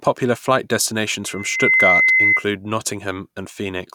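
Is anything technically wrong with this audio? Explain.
Yes, there's loudspeaker feedback squeal from 1.25 to 2.46 s. The mic is hearing its own speaker, so a 2 kHz tone swells over roughly half a second and ends up well above the speech.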